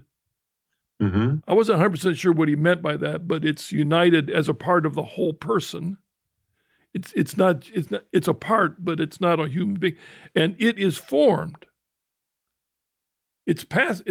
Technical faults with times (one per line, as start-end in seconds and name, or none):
none